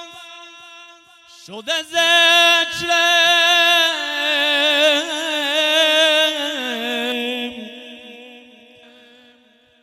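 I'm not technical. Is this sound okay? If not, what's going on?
No. From about 7.12 to 8.83 seconds the sound turns hollow and phasey, a bit like it's coming through a tube, with some of its brightness scooped out. This is channel delay (comb filtering). One of the two channels arrives a tiny fraction of a millisecond late, and when the two are combined into one, certain evenly spaced pitches cancel each other out. Here the first gap sits around 1.5 kHz.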